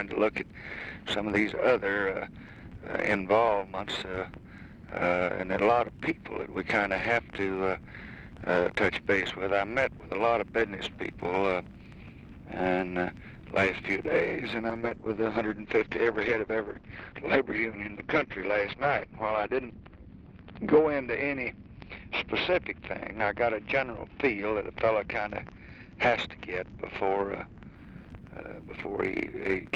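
At 14.71 s a call bitrate drop sets in and lasts until 27.81 s. The bandwidth estimate fell, so the encoder had far fewer bits to spend. The audio turns coarse and watery. High frequencies vanish as the upper limit falls from 20 kHz to 6 kHz, leaving a muffled tone. The roughness fits a fall from about 48 kbps to about 8 kbps. It holds at its worst for about 4.75 s before the quality climbs back.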